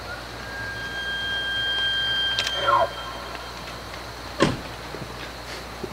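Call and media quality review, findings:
Video or display buzz, present for the whole clip. Steady 60 Hz buzz with harsh hash above it, sitting about 15 dB under the wanted signal. Probable component: display or video cable near the audio path. Field-rate interference coupling into the audio.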